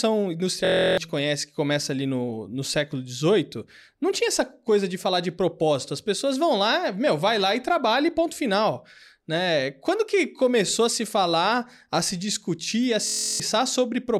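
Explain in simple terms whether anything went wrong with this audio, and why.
Twice the speech briefly turns into a flat buzz, from 0.65 to 0.98 s and again from 13.07 to 13.40 s. This is a system hang loop. The computer stalled while the sound hardware kept replaying the same 23 ms scrap of audio, which fits a 1024-sample buffer. It repeats 14 times at about 43 per second, so it comes out as a steady hum rather than silence or a crackle. That tells it apart from a simple dropout. Each time, about a third of a second of speech is lost.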